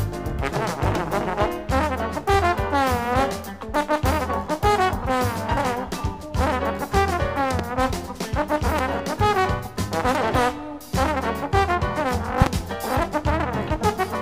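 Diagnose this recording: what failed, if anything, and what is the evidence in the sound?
Loud pops at 7.59–7.62 s and 8.79–8.81 s are single sharp thumps, about 15 dB above the sound. At 12.42–12.49 s, two pops arrive in quick succession, about 20 dB up. The sound continues beneath them. The likely stage is analogue wiring, where a plug or switch injects a voltage step.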